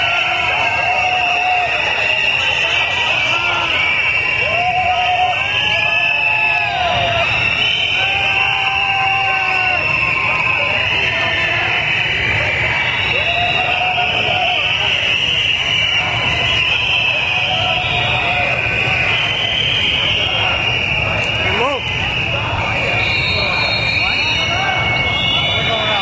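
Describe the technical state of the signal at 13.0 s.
At 13.0 s, as throughout, gain pumping is heard, likely from excessive input gain feeding a fast limiter: the gain swings about 10 dB, bringing loud and soft parts closer in level and squashing the sound.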